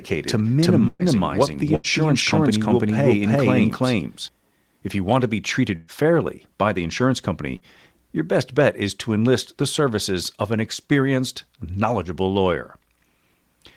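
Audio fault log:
0.00 to 4.28 s, doubled audio track: the speech is already doubled when the clip opens, with a second full-band copy sitting roughly 300 ms behind and at about the same level as the original. It's dry, with no decay or room colour, so it reads as a clean slapback rather than an echo, and it cuts off abruptly at 4.28 s. The likely cause is the same signal being picked up a second time through a slower path and mixed back in.
0.87 to 1.02 s, 1.75 to 1.87 s and 5.76 to 5.91 s, burst of packet loss: each time, about 120 ms, 80 ms and 120 ms of audio simply never arrives. The receiver covers the hole by stretching out the last sound and fading it down, so you hear a held buzz or a dwindling hiss before the speech picks up again further along with that stretch gone. At the first one the fill runs out slightly early, leaving about 20 ms of silence before things resume.
7.56 s, short concealed packet loss: a much smaller hole this time, roughly 40 ms that didn't reach the decoder in time. 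The receiver patches it by carrying the previous sound forward for around 40 ms and then blending back into the real audio, so what you hear is only a quick smear or wobble rather than an obvious dropout.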